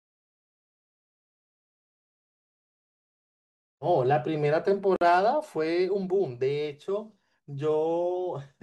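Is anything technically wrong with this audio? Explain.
Yes. At 4.96 to 5.01 s there is a gap at a join of encoded pieces: separately encoded segments were spliced without trimming encoder delay and final-frame padding, leaving about 51 ms of silence with smeared edges before the speech resumes where it stopped.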